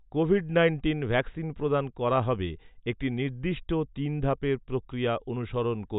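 Nothing technically wrong can be heard anywhere in this speech recording, which comes across as a continuous, stable signal without any fault to point to.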